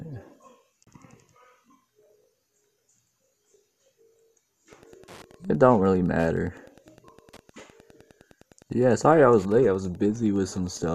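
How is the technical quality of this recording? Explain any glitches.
Two glitches mar the recording: a brief hole early on, then a faint ticking that runs from the middle to the end.

At 0.86 s the sound drops out abruptly and comes straight back, a digital broadcast dropout. The receiver muted for what fits a single corrupted frame, so about 24 ms of programme is simply missing.

From 4.64 s to the end there is a steady ticking near ten times a second, about 35 dB under the sound. This is Wi-Fi interference: a nearby radio's beacon, every 102.4 ms, is being rectified by the audio circuit.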